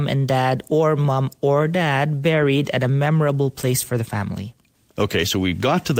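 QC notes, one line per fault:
No technical faults can be heard anywhere in the speech recording.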